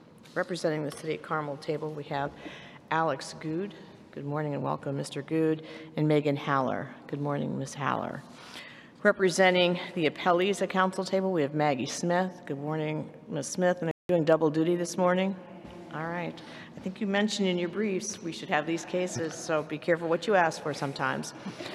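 At 13.91 s the sound cuts out abruptly and stays silent until 14.09 s, a gap of about 180 ms, before playback picks up again. This is a playback stall, likely caused by the player running out of buffered data or its output thread being blocked. On a waveform it appears as a flat line with hard edges on both sides; on a spectrogram it is a clean vertical band empty across all frequencies.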